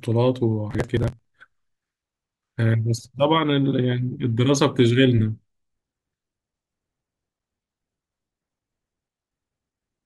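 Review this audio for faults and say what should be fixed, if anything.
Processor overload crackle, 0.71 to 1.25 s: the processor fell behind and skipped about 30 buffers over that stretch, with gaps that fit buffers of about 10 ms, tearing the speech into gritty crackle. To prevent it, reduce the processing load or enlarge the buffer so every block finishes before its deadline.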